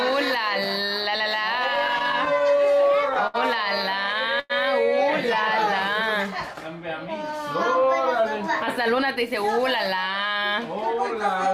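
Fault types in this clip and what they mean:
Repeated stalls (stutter): from 1.75 to 3.36 s, late packets emptied the jitter buffer 13 times, and the receiver extended the last sound for 185 ms in total (70 ms at most), so the audio drags and stutters.
Short stall from a late packet: at 4.40 to 4.52 s, a late packet emptied the jitter buffer, and the sound is held for about 99 ms before continuing from the same point.
Jitter buffer speed-up: from 8.66 to 11.47 s, the receiver trimmed short pitch-period pieces, roughly 150 ms in all, to shrink an overfull buffer, so the audio runs about 4% fast at unchanged pitch.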